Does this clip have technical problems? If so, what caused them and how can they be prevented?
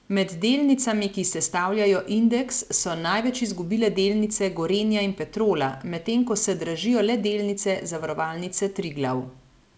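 No, the speech has no technical faults. It came through a WebRTC call path whose codec leaves nothing above 8 kHz, a band limit that fits G.722.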